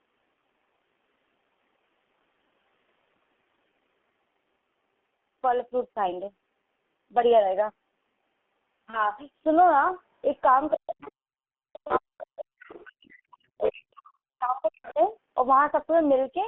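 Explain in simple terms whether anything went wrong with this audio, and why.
Several things went wrong, all typical of an internet phone call.

The whole recording passed through the G.723.1 codec, an old phone-call compressor that squeezes speech into very little data and keeps only a narrow telephone band, roughly 200 Hz to 3.4 kHz. Here it was pushed hard, so the speech sounds muffled and hoarse throughout, and consonants smear into each other instead of landing crisply.

There is VoIP packet loss concealed by the speech codec twice: a single chunk of the call, about 30 ms long, went missing around 8.90 to 9.15 s and again around 11.87 to 11.94 s. The decoder filled each gap by guessing from the sound just before it, so the speech briefly turns buzzy and smeared, then takes a moment to sound normal again.

The other side's voice leaking through is also audible. The talker was most likely on a speakerphone whose echo canceller didn't fully scrub the incoming voice from the microphone. 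A faint second voice slips in at 10.72 to 11.12 s and 14.63 to 14.92 s. From 11.73 to 14.02 s it comes through much more strongly, almost as loud as the main speech.

Speech suppressed in double talk happens because both people spoke at the same moment, likely confusing the echo canceller into turning everything down. At 10.74 to 11.01 s, and for a long stretch from 11.77 to 15.0 s, the main speaker's voice sinks sharply or drops out in pieces, nearly vanishing at its worst.

The background is gated by the echo canceller from 11.29 to 11.49 s. While the loudspeaker was playing, the canceller clamped the microphone down hard, so the room sound suddenly falls almost silent for about a fifth of a second before returning.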